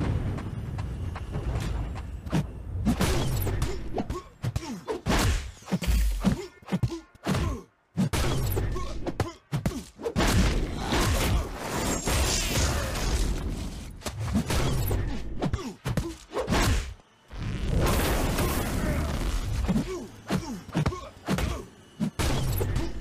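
Two devices in the chain are likely running on separate clocks that disagree by around 100 parts per million, so the buffer between them drifts until it must drop or repeat a small block of roughly fifteen samples. These clock drift buffer slips recur every 3.12 s between 0.67 s and 22.53 s, about seven in all, and each is heard as a brief, regular click or pop in the sound.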